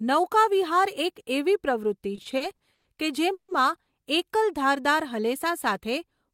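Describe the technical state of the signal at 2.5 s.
At 2.5 s the speech drags and stutters, with five brief holds between 2.15 and 2.86 s. These are repeated stalls (stutter): late packets kept draining the jitter buffer, so the receiver stretched the last sound for 230 ms in total, the longest hold 100 ms.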